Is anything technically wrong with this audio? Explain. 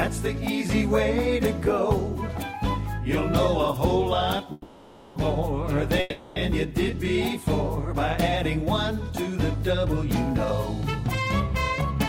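Yes, there are two call audio freezes. Delayed packets likely drained the jitter buffer at 4.52–5.19 s and 6.00–6.39 s, so the last sound stretches into a fading buzz for about 0.64 s and 0.36 s. The audio then resumes where it stopped, with nothing lost, but it now runs later.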